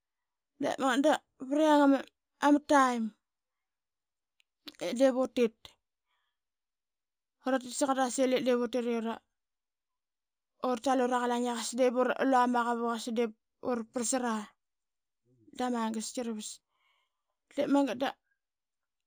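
Imaging from linear upsampling runs throughout: straight-line interpolation, likely from 16 kHz audio, dulls the top and leaves faint mirrored images between 8 and 16 kHz, a light metallic shimmer on sibilants.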